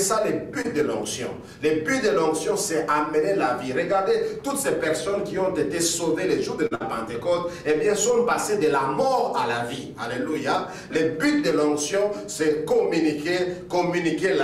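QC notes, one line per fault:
0.61–0.66 s, short stall from a late packet: a packet arrived late and the jitter buffer emptied, so the receiver stretched the last sound for about 29 ms. The sound holds briefly with a faint buzz or dip, and nothing is lost.
6.67–6.73 s, short stall from a late packet: a later packet left the buffer empty again, and about 43 ms of filler was added. The sound drags with a slight buzz or dip, then resumes where it stopped.
6.75–6.82 s, burst of packet loss: consecutive packets were lost, so about 51 ms of fading continuation was played. The audio then jumps ahead, skipping about 60 ms of sound.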